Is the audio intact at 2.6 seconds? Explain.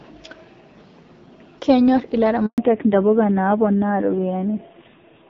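No. At 2.6 seconds the call is just coming out of a handover gap. From 2.46 to 2.58 s there is 120 ms of silence. The call was being moved from one network to another. No speech frames arrived during the switch. The sound fades within a few tens of milliseconds and stays dead until the new link starts. Anything said in that window is gone.

The audio resumes at 2.58 s, but it is degraded. This is a fallback to narrowband, and it lasts to the end of the clip. Before the switch the call ran on the AMR wideband (HD Voice) codec, with only light coding damage. Now it has dropped to an older narrowband codec. Nothing above 4 kHz survives. The voice sounds duller and rougher. Its coarse texture fits a low rate of about 5.9 kbit/s.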